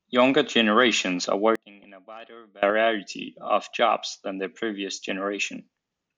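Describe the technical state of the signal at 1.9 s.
At 1.9 s the signal sits inside a span from 1.55 to 2.63 s where the level of the speech falls by about 24 dB and the centred voice turns faint. The likely cause is one channel inverted. With one stereo channel's polarity reversed, the content common to both channels cancels when they are summed to mono, leaving only the small left-right difference as a faint residue of the speech.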